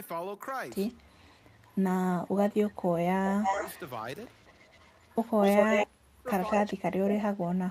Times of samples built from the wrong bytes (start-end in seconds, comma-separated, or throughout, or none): none